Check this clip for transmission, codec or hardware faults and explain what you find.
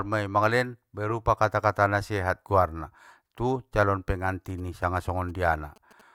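One hardware interference fault is present in this speech clip. From 4.50 to 6.01 s there are GSM signalling bursts: a nearby 2G phone's radio pulses, rectified by the audio circuitry, form a galloping dit-dit-dit of short 217 Hz buzzes well below the speech. Unlike steady mains hum, it arrives in short gated clusters.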